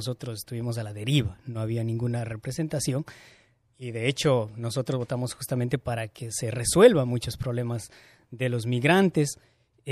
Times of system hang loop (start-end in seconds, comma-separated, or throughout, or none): none